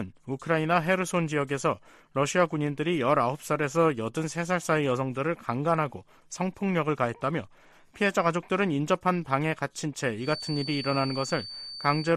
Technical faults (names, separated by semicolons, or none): feedback whistle